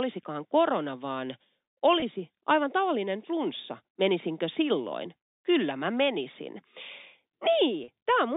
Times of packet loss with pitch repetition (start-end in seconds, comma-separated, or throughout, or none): 2.00-2.02, 7.84-7.88